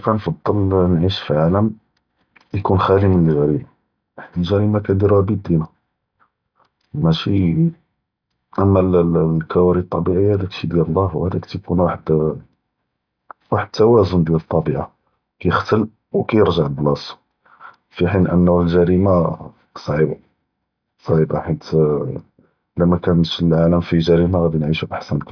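No technical faults can be heard at any point in the recording.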